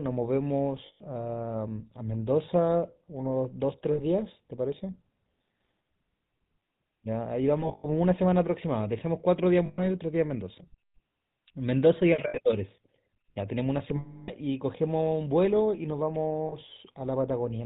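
A buzzy, gravelly roughness with nothing above 4 kHz runs throughout: GSM full-rate coding at 13 kbps, pulse-excited vocal-tract modelling that plainly degrades the speech. Lost GSM frames cause rough, metallic held rings, as the last good frame is repeated, at 0.86 s (140 ms), 3.92 s (60 ms), 7.60 to 7.86 s (scattered, longest run around a tenth of a second), 9.66 s (120 ms), 12.28 s (60 ms), 13.96 to 14.30 s (320 ms), and 16.48 s (40 ms).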